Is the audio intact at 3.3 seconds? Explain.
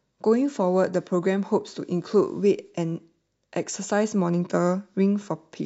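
Yes, at 3.3 seconds the audio is intact, with no dropout, click, distortion or other fault at that moment.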